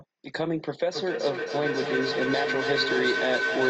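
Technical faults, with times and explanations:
0.93 s to end, feedback howl: a speaker-to-microphone loop gaining level each pass, about every 300 ms, builds a tone near 1.5 kHz, reaching about speech level.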